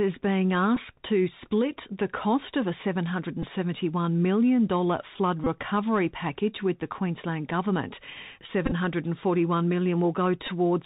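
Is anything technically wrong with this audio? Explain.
Yes. The speech came through a Bluetooth headset link, and it carries two faults.

The first, present throughout, is the Bluetooth CVSD headset codec. Each sample is reduced to a single up-or-down bit and the step size adapts to follow the waveform, so nothing above 4 kHz survives. The speech sounds narrow and telephone-like, loud bright sounds overrun the step and distort, s sounds turn scratchy, and a grainy hiss sits beneath everything.

The second is Bluetooth headset packet repeated, at 0.76 s, 3.42 to 3.45 s, 5.44 to 5.47 s, 8.66 to 8.72 s and 10.47 s. Voice packets were lost between headset and phone, and the chip decoded the previous packet's bits again in their place. About 7.5 ms was lost at each of the first two, 22.5 ms at 5.44 s, 37.5 ms scattered over 60 ms at 8.66 s with runs up to around 10 ms, and 11.2 ms at 10.47 s. 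Short losses leave small ticks. Longer runs repeat every 3.75 ms and produce a brief buzz near 267 Hz.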